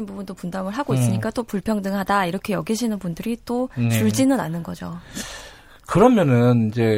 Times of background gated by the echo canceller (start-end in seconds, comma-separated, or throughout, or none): none